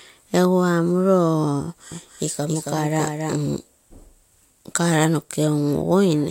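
From 1.92 s to 3.36 s the speech carries a doubled audio track: a second, full-band copy runs about a third of a second behind the original and a few decibels quieter. It has no decay or room colouring, so it sounds like a clean echo rather than reverberation. It cuts in and out abruptly at both ends. The likely cause is the same signal reaching the mix twice, once through a slower path or through an edit that left two offset copies.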